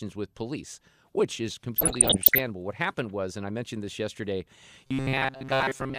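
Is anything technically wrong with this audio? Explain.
Yes, two faults stand out in this speech.

From 1.76 to 2.41 s there is DAB burbling: short blips of noise and sudden jumps in level in parts of the spectrum, riding over the speech. Bit errors from weak reception are slipping past the error correction into the MP2 data, so corrupted samples put short blips of noise in individual sub-bands, and corrupted scale factors make sub-bands leap in level for up to a frame. The density of the disturbance suggests an error rate somewhere around one or two percent.

From 4.87 s to the end, right after "I mentioned this yesterday", the speech turns into a rigid metallic buzz pitched at 133 Hz that only loosely tracks the speech. This is robotic sound from repeated short buffers. The likely cause is new audio arriving too slowly, with playback looping a fragment of about 7.5 ms to fill the gaps. 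Most of that stretch is repetition, while the real audio is skipped.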